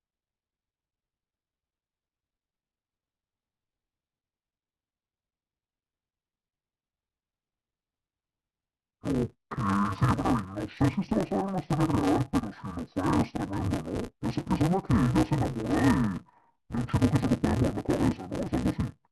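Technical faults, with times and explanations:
Throughout, interleaved audio read as planar: 5.33 ms blocks are split wrongly, leaving the speech dull and robotic with a 188 Hz buzz but, unlike pitch shifting, no octave drop.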